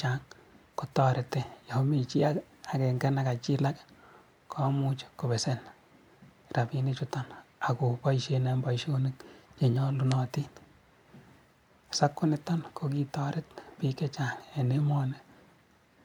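No technical faults are audible anywhere in this speech.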